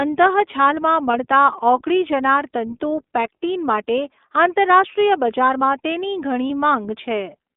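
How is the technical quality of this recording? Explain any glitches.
The recording has plainly audible codec damage throughout and two short dropouts where audio was lost in transmission.

The whole clip has passed through the iLBC codec, a narrowband VoIP coder. The band is limited to roughly 250 Hz to 3.6 kHz, so the speech sounds thin, with no low warmth and no air or sibilant detail above that. Each block of audio is coded on its own from a compact model of the excitation signal, leaving a slightly rough, synthetic edge on the speech. The character fits iLBC's 20 ms frame mode, at a rate around 15 kbps.

There are two instances of lost iLBC frames, at 1.12–1.15 s and 6.48–6.51 s, each about 20 ms long, consistent with a single missing packet. With no data for that stretch, the decoder fills the gap by repeating the last pitch cycle mixed with noise, which sounds like a brief held, faintly buzzy vowel in place of the real sound. 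Because iLBC frames do not depend on previous ones, the speech returns to its normal coded quality immediately afterwards.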